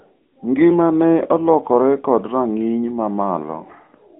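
From the first moment to the end, the speech has the AMR narrowband mobile codec sound. Everything above about 3.8 kHz is gone and the lows below roughly 150 Hz are thin. The vocal-tract model leaves a clearly buzzy, synthetic edge, which fits a mid-rate AMR-NB mode around 10.2 kbps.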